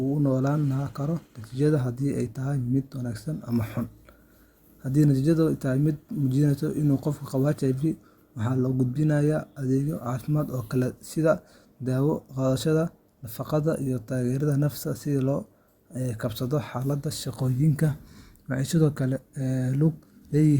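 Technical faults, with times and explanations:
Nothing stood out as a technical problem on listening to this speech recording.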